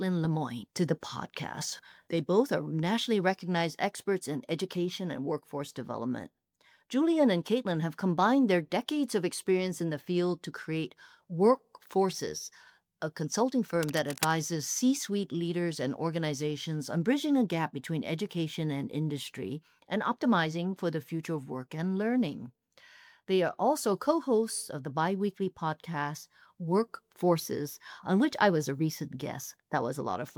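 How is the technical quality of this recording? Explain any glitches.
One glitch stands out. Cable scratch noise from 13.83 to 14.32 s: a worn cable or connector, likely shifting mid-take, lets contact resistance jump, adding rough scratching bursts about 10 dB below the sound.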